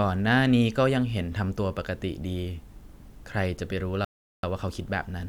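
At 4.05 s the speech halts abruptly and drops to dead silence for roughly 0.39 s, then picks up at 4.43 s exactly where it left off, with no syllable skipped or repeated. That gap is a rebuffering stall: playback consumed all the audio it had downloaded and had to wait for more data to arrive. Because nothing is discarded, the pause simply inserts about 385 ms of extra time into the clip.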